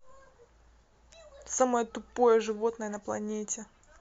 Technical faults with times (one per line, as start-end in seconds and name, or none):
none